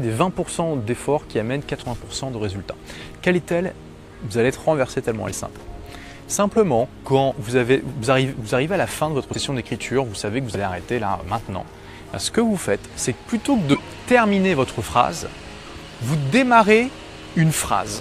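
Six times the audio jumps ahead because compressed frames were skipped: at 1.81 to 1.85 s, 5.27 to 5.34 s, 7.32 s, 9.34 s, 10.54 to 10.57 s and 13.73 to 13.79 s. Each time whole frames never reached the output, lost from the stream or thrown out by the decoder, so a chunk goes missing. That's around 20 ms at the first, a tenth of a second at 9.34 s, and around 50 ms elsewhere. Each join is heard as the sound jumping ahead by that much.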